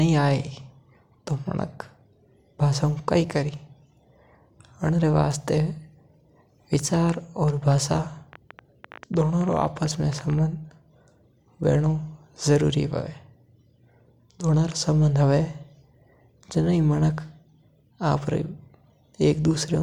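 A speech recording with a train of clicks from 6.74 to 10.40 s: roughly forty similar ticks, about 9.6 per second at an uneven pace, peaking about as loud as the speech, likely from interference or a faulty connection or power supply.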